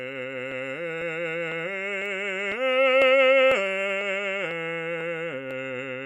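Periodic USB or driver dropouts run through this music clip from 0.52 s to 5.51 s, heard as regular ticks every 0.50 s, about ten in all. Each time, a tiny slice of audio, roughly half a millisecond, is skipped outright rather than filled, so the waveform jumps and clicks. The steady spacing points to a background task stalling the USB bus or audio driver on a fixed schedule, briefly starving the stream of samples.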